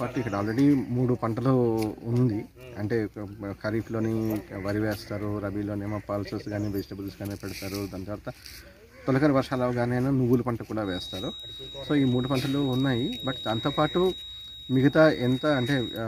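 From 10.80 s to the end at 16.07 s, a thin, steady feedback whistle near 3.8 kHz sits around 15 dB below the audio, swelling and fading slowly in level. The likely cause is a loudspeaker-to-microphone loop held just at the edge of feedback.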